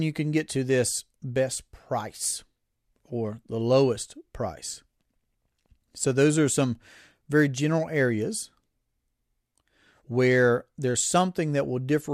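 No technical faults are audible.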